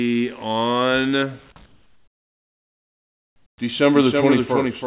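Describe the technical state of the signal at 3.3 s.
Comfort noise in place of the background covers 3.3 s, within a span from 1.66 to 3.58 s. The sender likely stopped transmitting during the pause, and the receiver filled it with steady, featureless synthetic noise about 16 dB quieter than the real background, all held below 4 kHz.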